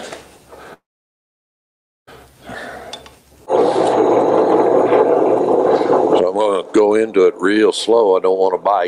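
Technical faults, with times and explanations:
0.73–2.09 s, long network dropout: a brief fading buzz, then about 1.3 s of silence; audio resumes with that span gone, likely from undelivered network packets.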